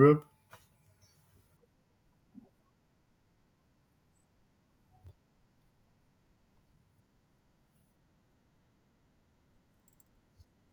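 Periodic USB or driver dropouts run from 3.06 to 7.27 s: about every 0.1 s, something blocks the audio path and roughly two milliseconds of speech drops to silence, around forty times in all, heard as an evenly spaced ticking while the voice continues.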